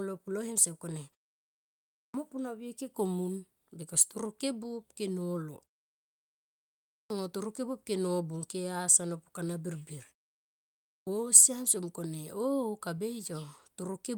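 At 2.08, 7.04 and 11.01 s you get a clipped start after a pause: after about one to one and a half seconds of quiet, the output hasn't woken back up, so about 60 ms of the next word vanishes and speech pops in abruptly.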